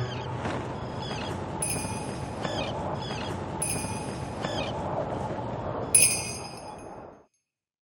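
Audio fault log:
2.94–4.94 s, stream segment repeated: right around 2.94 s there's a small blip, and then the audio jumps back and replays roughly the last two seconds before carrying on, so you hear the same stretch twice. That's the player fetching or queuing one chunk of the stream a second time. The blip is the seam where the duplicate gets butted onto the original, and the replay adds about 2.0 s to the running time.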